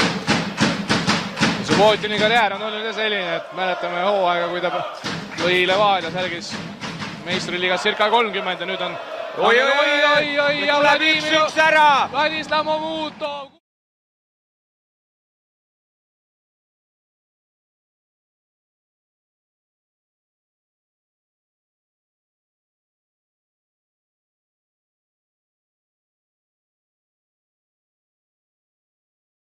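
No technical faults can be heard anywhere in this recording. Nothing in the sound marks a point where the audio path went wrong.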